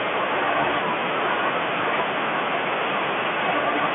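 No technical faults can be heard in this speech.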